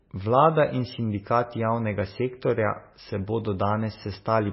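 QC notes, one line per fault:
Throughout: MP3 compression. The likely cause is an MP3 encode starved of bits, which fits a bitrate near 18 kbps. Short of data, the encoder cuts the treble at 5.6 kHz and drops weak frequency lines that then flicker on and off between frames. The speech sounds dull and muffled, with no air or crispness above that cut. The remaining tone has a watery, swirling texture, s sounds turn smeared and metallic, and consonant onsets lose their sharpness.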